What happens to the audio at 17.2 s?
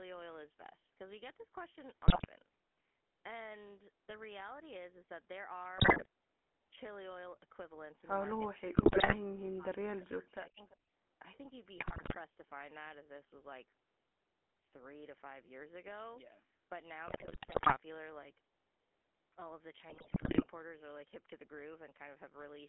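At 17.2 s the sound falls inside a burst of GSM bit errors lasting from 17.08 to 17.77 s. Corrupted bits reach the decoder, and damaged filter, pitch and gain values bend the spectrum and swing the level frame by frame, so the speech breaks into squawks, pops and gargling.

Underneath, as everywhere in the clip, the GSM full-rate codec is plainly audible. Its pulse-driven vocal-tract model gives a buzzy, gravelly roughness, consistent with a 13 kbps full-rate stream. The line band runs only from about 250 Hz to 3.4 kHz.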